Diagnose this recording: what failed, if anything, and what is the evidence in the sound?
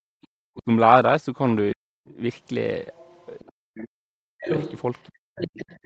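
The failure is in call processing, at the echo canceller. The first thing heard is background gated by the echo canceller. From 0.00 to 0.05 s the room sound is pulled down by about 38 dB, then comes back. The canceller heard its loudspeaker playing and clamped the microphone hard for a few tens of milliseconds. It released once it judged no echo was present.

A second voice is heard under the talker, the other side's voice leaking through. It appears as a faint scrap at 0.22 to 0.26 s, some 35 dB down. It returns from 2.92 to 3.46 s, around 30 dB down. From 4.48 s to the end it is much louder, only about 10 dB under the speech. The likely cause is loudspeaker sound reaching the microphone that the echo canceller did not fully remove.

The talker's own speech is also cut, which is speech suppressed in double talk. It sinks sharply, by roughly 40 dB at worst, from 0.33 to 0.69 s, 1.74 to 2.10 s, 3.48 to 4.49 s, and 5.07 s to the end. 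The likely cause is that both sides were talking at once. The suppressor could not tell the talker from the echo, so it attenuated everything.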